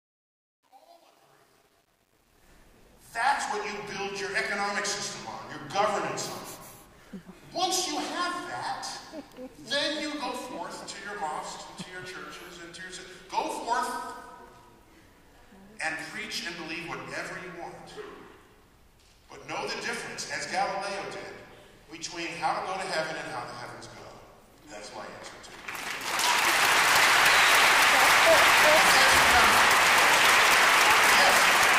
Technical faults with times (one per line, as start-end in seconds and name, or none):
0.00-2.48 truncation distortion on a fade